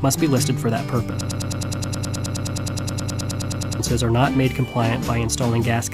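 Audio clip with a broken-record loop from about 1.21 s to 3.80 s: a tiny slice, roughly 105 ms long, repeats back to back about 25 times, so you get a fast stuttering buzz instead of whatever should have played there. That stretch of sound is simply gone. The likely cause is the player, encoder or stream stalling and re-sending the last fragment it had buffered until it caught up.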